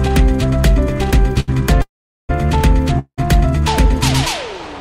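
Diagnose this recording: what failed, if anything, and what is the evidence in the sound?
The network path delivered one packet late, and the jitter buffer ran dry for a moment, producing a short stall from a late packet at 1.40 to 1.50 s. For 75 ms the receiver held the last sound, so it drags and thins slightly before carrying on from exactly where it paused. Nothing is lost, but everything after it now plays 75 ms later than it should.

Two longer call audio freezes follow, at 1.82 to 2.31 s and 2.99 to 3.20 s. The likely cause is packets held up in the network long enough to empty the receive buffer. In the first freeze the sound is continued briefly and then falls silent for about 410 ms. In the second it fades to about 80 ms of silence. Playback then resumes from the same point, adding 472 ms and 187 ms of gap respectively.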